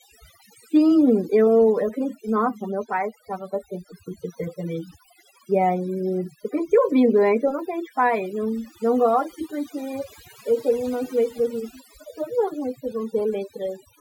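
Overdone noise removal runs through the whole speech clip. A noise reduction stage was set far too strong. It judged many frequency bands to be noise and pulled them down or shut them off entirely. Quiet parts of the voice fell below its threshold and were cut along with the noise. The pauses drop to near silence, dotted with small twinkling specks.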